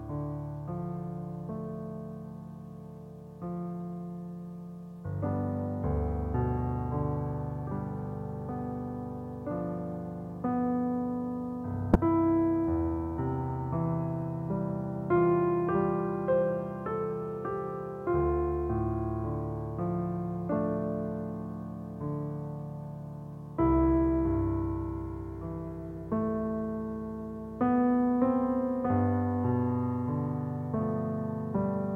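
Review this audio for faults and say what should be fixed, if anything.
Damaged data in a compressed stream sits between 11.92 and 11.96 s. A short run of the encoded bytes there is corrupt, so the decoder misreads or rejects those frames, loses sync and has to hunt for the next valid frame header before it can resume. For roughly 40 ms the sound turns into a brief blip or squawk before normal decoding picks up again. The fix is to re-fetch or re-encode that portion from an intact source. To prevent it, verify the file or stream with checksums or frame CRCs during transfer and storage so that corrupted segments are caught and replaced before playback.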